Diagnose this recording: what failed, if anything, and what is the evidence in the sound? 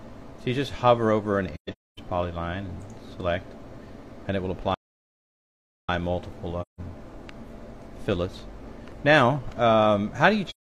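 AAC frame loss with muting appears at 1.54 to 1.99 s, 6.61 to 6.80 s and 10.50 to 10.70 s, a codec-stage fault fed by lost data in transmission or storage. In the first stretch about 0.38 s of sound vanishes across roughly 0.43 s, with the longest single gap around 0.3 s. The second hole is about 0.17 s. The last runs to the end of the audio. The decoder zeroed the missing frames' spectrum, so the overlapping windows fade the sound down and back up rather than cutting with a click.

A playback stall at 4.74 to 5.89 s drops the output to silence for about 1.14 s in mid-flow. This is a playback-stage fault, and its likely cause is the player's buffer running dry or its output thread being blocked, leaving nothing to send to the device until it recovered. Unlike the codec holes, the audio simply stops for a long, continuous stretch rather than fading in and out over a frame's length.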